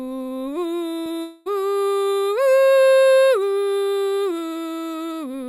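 At 1.03 to 1.08 s the music smears briefly, a short concealed packet loss. About 20 ms of audio missed the decoder's deadline, and the receiver covered the hole with roughly 23 ms of synthesised continuation, extending the preceding sound from its pitch or as shaped noise before crossfading back into the real signal. The result is a momentary wobble rather than a gap.

From 1.22 to 1.48 s a longer disturbance follows: the music gives way to a drawn-out, fading continuation of the last sound for about 240 ms, and the real audio resumes afterwards with that stretch missing. The likely cause is a long network dropout. The concealment ran for nearly the whole gap, about 238 ms, so there is no true silence. Instead the sound decays into an artificial buzz or hiss before the stream picks up again.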